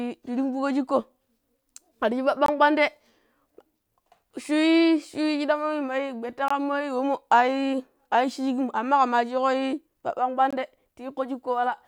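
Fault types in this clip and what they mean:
gap between chunks: Three brief hard-edged dropouts of about 21 ms each break the speech, at 2.46 s just before "kwaan dee", then 6.48 s and 10.51 s. They recur every 4.0 s, so the audio was joined from 4-second chunks with a short stretch of silence inserted at each join, interrupting the sound without losing any.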